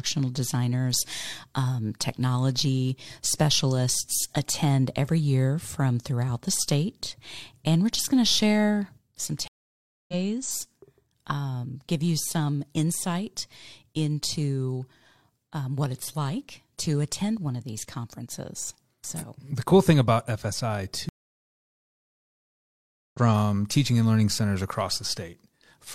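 Speech with two stream reconnects: the connection drops, leaving 0.61 s of silence at 9.48 s and 2.05 s at 21.09 s. A fresh decoder then picks up the stream, roughly 0.4 s and 2 s further on.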